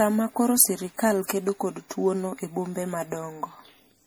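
Speech with generation loss throughout: a swirly, hollow smear and blurred attacks, worse than one 64 kbit/s-like MP3 pass, likely from about five re-encodes.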